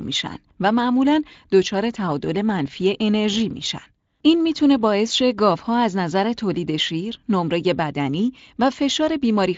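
No technical faults can be heard in this speech.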